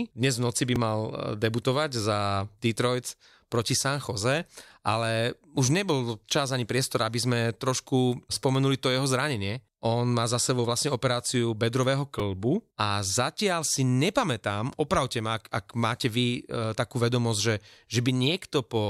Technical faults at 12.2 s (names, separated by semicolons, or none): repeated buffer